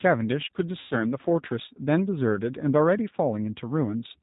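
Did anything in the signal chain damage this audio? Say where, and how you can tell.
Yes. At the codec stage, the whole clip carries G.729 damage. Nothing reaches above 4 kHz, and the speech sounds rough and slightly synthetic. That fits an 8 kbit/s G.729 coder rebuilding each 10 ms frame from a vocal tract filter and a few pulses.

At the network stage, VoIP packet loss concealed by the speech codec shows from 0.79 to 0.96 s. About 120 ms of audio is missing, and the decoder stretches its last pitch and filter into a fading buzzy tone or coloured noise. Speech stays weak or distorted for a while after packets resume.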